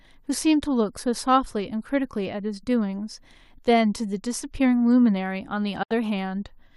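A digital broadcast dropout cuts this speech from 5.83 to 5.91 s: the receiver stopped getting valid frames and muted, fading out over about 8 ms. Roughly 72 ms of programme is simply missing, a gap that fits about three lost frames.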